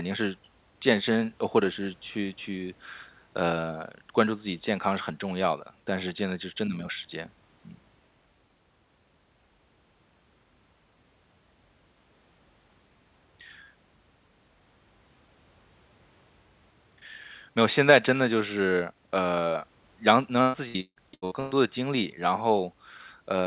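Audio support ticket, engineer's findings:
Repeated packet loss (robotic sound), 20.42–21.57 s in speech: six dropouts, longest 155 ms, roughly half the span patched by extending prior audio. Choppy result. Jitter buffer/concealment on a call path band-limited at 4 kHz, consistent with G.711 mu-law.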